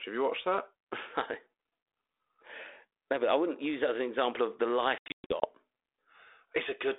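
From 4.98 to 5.47 s, just after "an example of the", packet loss on an ADPCM call cuts hard-edged silent holes, about 280 ms in all across 440 ms, the longest 120 ms. Unlike a plain dropout, each return is slightly distorted until the decoder's predictor and step size catch up.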